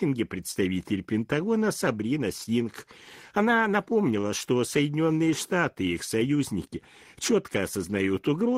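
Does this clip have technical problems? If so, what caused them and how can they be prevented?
Yes. Short concealed packet loss occurs at 0.51 to 0.59 s and at 2.44 to 2.50 s. About 40 ms of audio arrived too late each time, so the decoder extended the preceding sound to fill the gap, which is heard as a brief smear. On a spectrogram the harmonics freeze into a smooth, copied stretch before normal detail resumes, and the waveform shows a short repetitive section. A steadier network connection and a larger jitter buffer would prevent these dropouts.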